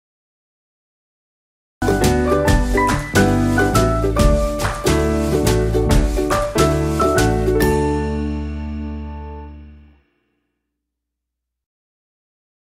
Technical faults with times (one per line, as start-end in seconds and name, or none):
0.00-1.82 cut-off start